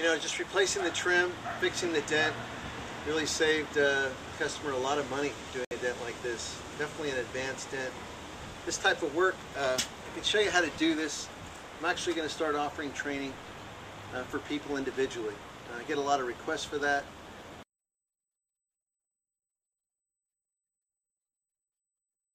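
A digital broadcast dropout breaks the audio at 5.65 s. The sound mutes to silence and returns at 5.72 s. The receiver stopped getting valid frames and muted until clean ones arrived. The hole fits two lost frames. About 64 ms of programme is gone.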